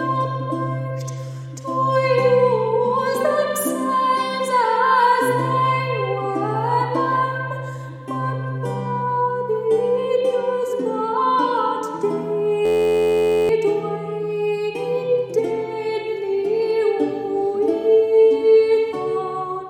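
At 12.66 s the audio locks into a system hang loop and stays stuck until 13.49 s. The driver froze while the hardware kept replaying the same ring buffer, so a tiny 11.61 ms slice repeats dozens of times. That short a cycle sounds like a steady buzz at about 86 Hz, not a stutter, and the period fits a 512-sample buffer. Roughly 0.7 s of the real sound goes missing under it.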